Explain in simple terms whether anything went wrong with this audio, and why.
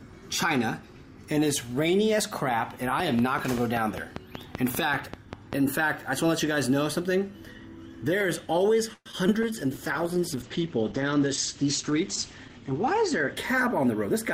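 Yes, several things went wrong.

First, a train of clicks runs from 3.0 to 5.5 seconds. There are roughly fifteen ticks. They arrive evenly, about five each second. They sit on top of the sound and stand out clearly. Each click has much the same shape. This pattern most likely comes from electrical interference or a faulty connection or power supply. Something kept injecting a pulse at a steady pace.

Next, there is a call audio freeze from 8.93 to 9.08 seconds. The sound stalls for about 123 milliseconds. The last bit of audio is stretched into a fading buzz or hiss. The final 30 milliseconds are silent. Then the audio resumes where it stopped. Nothing is lost. A gap is simply inserted, so everything after it runs 123 milliseconds later. The likely cause is packets held up on the network.

Right after, there are two short concealed packet losses. The first is at 9.12 to 9.15 seconds, the second at 9.27 to 9.30 seconds. 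Each time, about 20 milliseconds of audio never arrived. The receiver patched the hole by extending the sound just before it. You hear a brief smear or wobble. A tiny piece of the real audio is gone each time.

From 9.44 seconds to the end, there is a call bitrate drop. The connection signalled trouble, so the sender switched to far less data. The sound turns rough and muffled. Before, detail reached up to 20 kHz. Now everything above 8 kHz is cut away. The lowest quality lasts about three seconds. It does not recover before the clip ends.

Last, a jitter buffer speed-up runs from 13.34 to 14.15 seconds. Too much audio had piled up waiting to play. To catch up, the receiver snipped out many tiny slices, about 50 milliseconds in total. The pitch stays the same. But the sound plays about 6 percent faster. It feels slightly hurried for that stretch.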